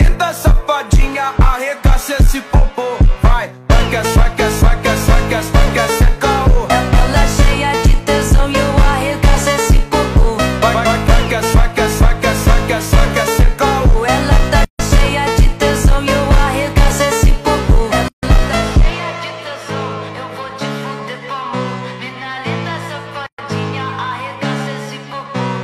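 At 14.65 to 14.79 s, 18.08 to 18.23 s and 23.26 to 23.38 s, the sound drops into silence lasting about 148, 147 and 120 ms: a gap at a join of encoded pieces, where separately encoded sections kept their encoder start delay and final-frame padding. Unlike a dropout, nothing is missing: each time the sound resumes exactly where it stopped, and the edges of the silence are softened by the codec.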